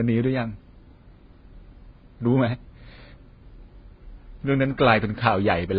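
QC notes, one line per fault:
Throughout, transcoding between lossy codecs: the speech is dull and band-limited, with nothing above 5 kHz. The artefacts of two codecs are heard together, two kinds of coding damage at once. This is likely a low-bitrate AAC-LC encode, around 16 kbit/s, re-encoded to Vorbis at roughly 22 kbit/s. Vorbis spends bits copying the first codec's artefacts and adds its own, and the lowest cut-off in the chain persists.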